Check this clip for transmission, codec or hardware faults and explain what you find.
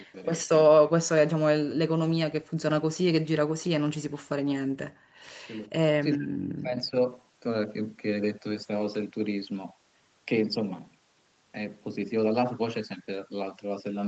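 Three kinds of echo-canceller fault are audible in this speech, over a call path whose audio stops at 8 kHz.

Speech suppressed in double talk occurs at 0.00–0.15 s, 5.98–6.42 s and 6.62–6.95 s. The talker's level falls sharply, by roughly 40 dB in the first two and roughly 20 dB in the third. The likely cause is the canceller mistaking overlapping far-end speech for echo and attenuating both.

Background gated by the echo canceller runs from 4.66 to 5.23 s. While the loudspeaker signal is active, the canceller clamps the microphone path, so the room sound drops by about 40 dB for roughly half a second and returns when suppression releases.

An echo leak appears at 5.63–5.67 s as a brief, faint delayed copy of the voice, about 400 ms late and roughly 40 dB below the speech. This is likely residual loudspeaker pickup that the far end's canceller failed to remove.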